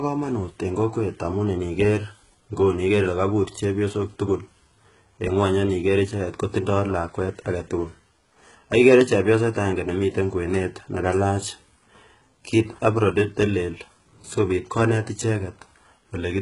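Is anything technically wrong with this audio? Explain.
Yes. Throughout the speech, the treble sounds bright but false: s sounds come across gritty and lispy, with a metallic sheen, and there is nothing at all above about 11.1 kHz. This is likely heavy HE-AAC compression, consistent with a very low bitrate around 12 kbps. The codec encodes only the lower spectrum and rebuilds the highs by copying lower bands upward under a coarse envelope, so the synthetic treble's harmonics no longer line up with the real ones below.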